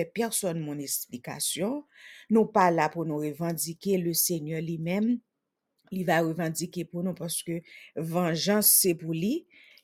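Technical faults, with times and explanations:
No technical faults are present in this speech clip.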